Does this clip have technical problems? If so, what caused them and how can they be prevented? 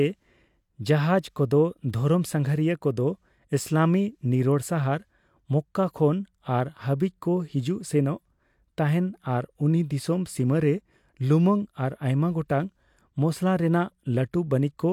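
No, nothing in this speech recording points to a technical fault, so there is no cause to trace and nothing to prevent.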